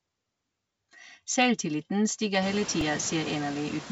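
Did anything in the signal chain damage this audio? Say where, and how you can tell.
Yes. The call processing stage's noise suppressor is causing noise suppressor artifacts throughout. It estimates the steady background and pulls those bands down by about 21 dB frame by frame, so the noise floor sinks in the gaps between speech and climbs back underneath it. That pumping gets more obvious after the room noise rises by about 23 dB near 2.5 s.

At 2.81 s, the driver or buffer stage produced a repeated buffer. Fresh samples weren't ready, so the last block was played three extra times. Each copy is only about 1.45 ms long, which fits a 64-sample buffer, so the loop is heard not as a stutter but as a tiny click or buzz with hard joins. Almost no audio is lost, because the repeats fill a gap rather than replacing content.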